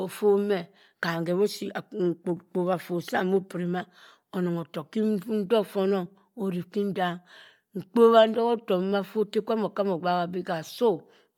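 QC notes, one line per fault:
Throughout, Bluetooth LC3 compression: the speech has a plainly audible breathy, grainy edge with smeared upper frequencies. This is likely a Bluetooth LE Audio LC3 transform codec that fills thinned treble with noise, which fits a mid bitrate around 48 kbps with 10 ms frames.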